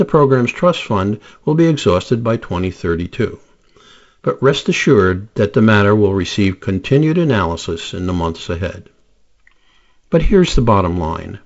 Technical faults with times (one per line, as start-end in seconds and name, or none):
none